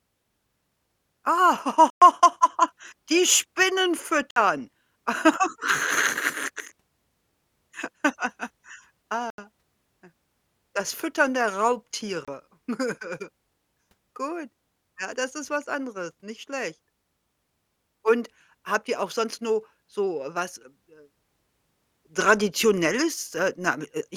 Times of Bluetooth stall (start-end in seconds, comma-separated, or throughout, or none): 1.90-2.02, 4.31-4.36, 9.30-9.38, 12.25-12.28